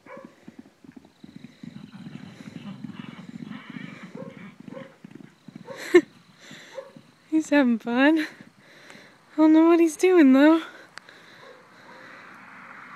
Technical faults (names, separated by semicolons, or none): none